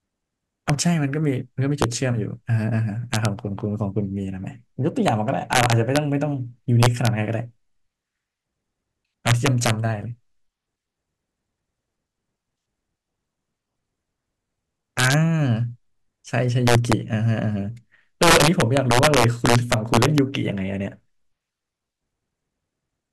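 Integer overflow runs throughout: with the gain about 8 dB too hot, the few loudest speech peaks wrap to the opposite sign, producing violent, sharp cracks.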